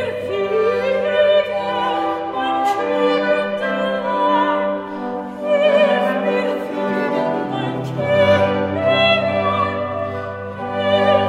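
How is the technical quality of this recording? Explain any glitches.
No glitches turn up anywhere in this recording, so there's nothing here that needs explaining.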